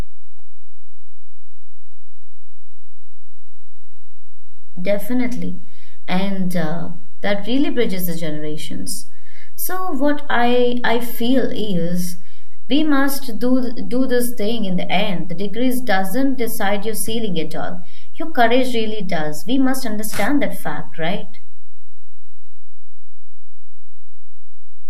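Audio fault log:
Throughout: DC offset. Something in the signal chain adds a constant bias of about -11 dBFS, shifting the whole speech waveform off zero. It isn't heard directly, but it eats headroom on one side and shows as steady energy at the very bottom of the spectrum.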